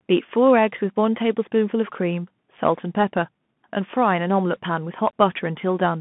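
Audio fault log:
Throughout, Bluetooth CVSD headset codec: the speech is confined to roughly 150 Hz to 3.5 kHz, with nothing above 3.8 kHz, which fits the 64 kbps narrowband headset link. Each sample is coded as a single up-or-down step whose size adapts, so bright, fast-rising sounds outrun the step and distort audibly, s sounds come out scratchy, and a grainy hiss from the constant stepping sits beneath the speech.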